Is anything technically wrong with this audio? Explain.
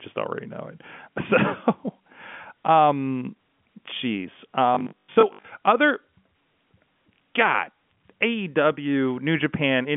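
Yes, one thing. From 4.75 to 5.45 s, right after "um jeez", there's robotic sound from repeated short buffers: a rigid metallic buzz at 50 Hz, likely from 20 ms chunks being replayed, about half of them, in place of audio that didn't arrive in time.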